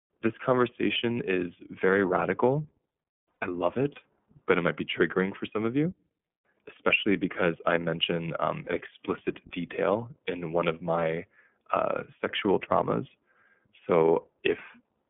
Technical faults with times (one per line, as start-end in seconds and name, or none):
0.00-15.09 iLBC codec
3.39-3.43 lost iLBC frames
6.75-6.78 lost iLBC frames
8.64-8.68 lost iLBC frames